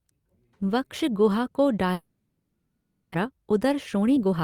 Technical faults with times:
1.93-3.16 long network dropout
3.24-4.40 jitter buffer speed-up

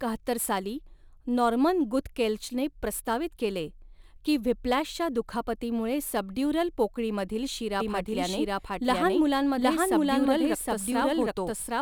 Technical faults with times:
7.80-11.82 doubled audio track

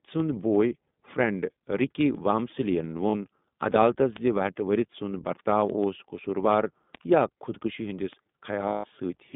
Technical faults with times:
0.00-9.35 iLBC codec
3.10-3.15 lost iLBC frames
8.68-8.86 lost iLBC frames

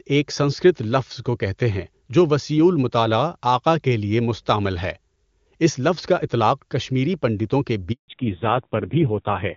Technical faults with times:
7.92-8.08 handover gap
8.08-9.57 fallback to narrowband

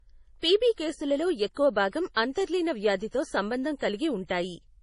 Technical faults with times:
0.00-4.82 low-bitrate audio saved at a high bitrate

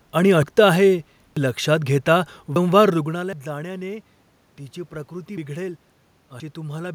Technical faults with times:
3.33 dropped buffer (overrun)

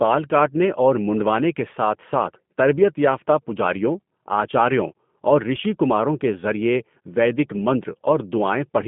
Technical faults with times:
0.00-8.88 G.729 codec

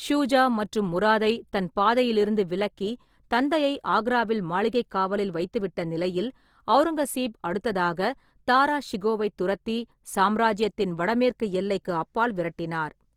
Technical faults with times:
0.00-13.17 Opus compression

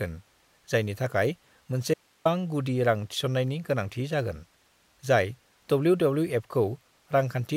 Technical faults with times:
1.94-2.25 audio dropout to a faint residue

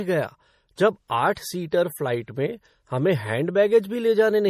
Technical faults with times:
0.00-4.50 MP3 compression
0.76 pre-echo
1.35 pre-echo
1.71 pre-echo

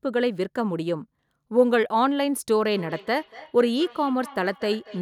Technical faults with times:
2.65-5.01 feedback echo between two devices

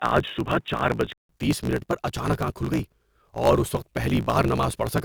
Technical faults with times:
0.00-5.04 block size mismatch (truncated)
0.00-1.29 input switched to a poorer device

